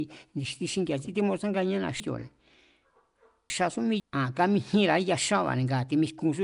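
Nellymoser compression runs through the whole clip, and the roughness points to the Flash-era Nellymoser Asao codec as the likely cause. That codec codes short blocks at a fixed, small bit budget, so weak bands get no real detail and are filled with noise instead. Here the damage is plainly audible: the speech carries a hissy, grainy halo and a smeared, underwater edge. Nothing is present above about 10.6 kHz, and the overall texture fits a bitrate around 44 kbps.

Chunks out of order affect the stretch from 2.0 to 4.0 s, right after "ni̱xti xingi̱a̱ xí timútsanganíéna". A 500 ms piece of audio plays after the sections that should follow it, with the pattern fitting a delay of three such pieces. No sound is lost, but the sequence is scrambled, so this two-second span comes out jumbled and garbled. Each spot where mismatched pieces meet leaves a hard join.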